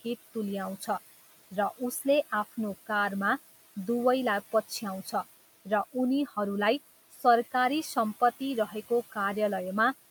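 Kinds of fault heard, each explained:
Noise suppressor artifacts: The background noise dips in the gaps between phrases and comes back up underneath the speech, so the noise floor seems to breathe. This comes from a suppressor judging each frequency band frame by frame and pulling down whatever it treats as steady noise, here by about 14 dB. The room noise itself, about 17 dB below the speech, is simply part of the recording.
Speech cut by the noise suppressor: At 7.12 to 7.24 s a brief stretch of speech turns faint and sounds swallowed, as if part of it dropped away for roughly a tenth of a second. The suppressor mistook that quiet speech energy for background noise and turned it down with the noise, by about 13 dB at its deepest. The gain reduction meant for the room noise fell on the speech.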